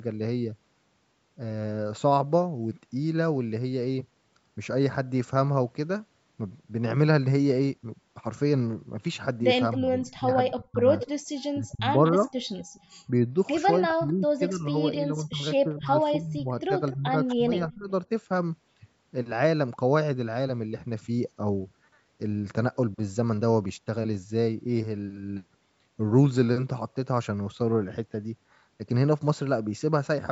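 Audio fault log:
9.72–9.77, 10.48–11.09, 12.04–12.8 and 17.28–17.36 s, echo leak: faint, delayed copies of the speech come back about 239 ms behind the original, and 250 ms in the last instance. They sit roughly 15, 10, 20 and 20 dB below the speech. The likely cause is a loudspeaker-side echo canceller letting residue through. On a spectrogram these appear as ghostly repeats of the harmonic pattern, shifted a quarter second later. In the waveform they show as low-level bursts trailing the louder speech.
9.77–10.86, 11.55–12.24 and 13.8–17.89 s, speech suppressed in double talk: the speech dips and thins in pieces while the other side is active, by as much as about 25 dB in the first stretch and about 20 dB later. The affected parts total about 0.7 and 0.3 seconds in the first two spans and around two seconds in the last. The likely cause is the echo canceller ducking everything it could not separate. 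A waveform shows the envelope sagging abruptly, and a spectrogram shows patchy gaps where the upper harmonics vanish below the 8 kHz band edge.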